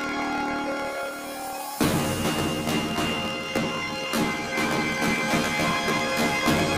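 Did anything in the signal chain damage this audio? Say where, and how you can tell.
Yes. Planar audio was read as interleaved at the sample-format conversion stage, throughout the whole clip. Everything sounds an octave high, with a flutter at 38.3 Hz. That flutter rate matches 26.12 ms blocks, each played twice at double speed, left channel first and then right.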